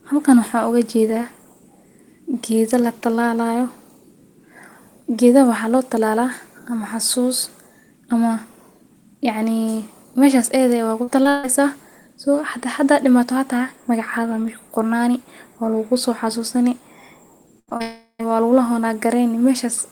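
At 11.03 s the speech hits a short concealed packet loss. About 40 ms of audio arrived too late to decode. The receiver extended the last sound over the hole for about 36 ms and blended back. It is heard as a brief smear. A second one follows at 11.23 s, about 20 ms long, and sounds like a brief wobble.

From 11.29 to 11.45 s comes a burst of packet loss. About 140 ms in a row was lost. The receiver carried the last sound forward for about 145 ms, fading it as it went. The result is a held buzz or fading hiss with no silence. Speech then resumes further on, with that stretch missing.

The same pattern returns near the end. From 17.59 to 17.69 s a second burst of packet loss removes about 80 ms. It is bridged by a fading continuation of about 79 ms. Two more short concealed losses follow at once. One at 17.69 s loses about 20 ms, and one at 17.77 s loses about 40 ms. Each is heard as a quick wobble.

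From 17.82 to 18.29 s the audio stops being real speech. For about 374 ms a smeared continuation of the last sound fades out, followed by about 80 ms of silence. Then speech returns further on. About 380 ms is gone, which points to a long network dropout as the likely cause.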